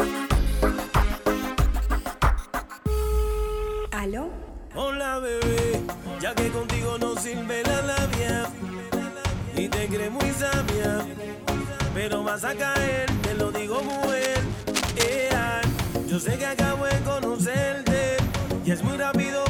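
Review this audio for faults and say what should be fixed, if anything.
A worn cable or connector likely shifted from 13.73 to 15.28 s, its fluctuating contact resistance producing cable scratch noise: dense, uneven scratching about 10 dB below the signal. Replace worn leads and connectors, and secure cables so nothing moves while recording.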